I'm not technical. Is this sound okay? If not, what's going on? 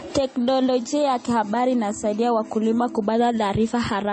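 No. The speech sounds dull throughout, with nothing above about 8.9 kHz. This is likely transcoding between lossy codecs, where audio was compressed twice and each pass added its own damage.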